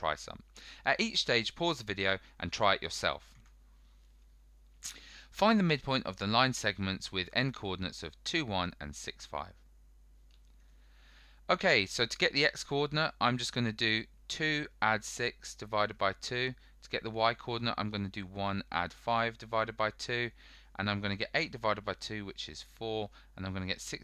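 No technical faults are audible.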